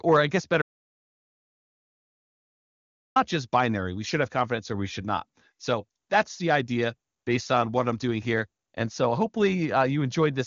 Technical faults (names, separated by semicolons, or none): audio dropout to silence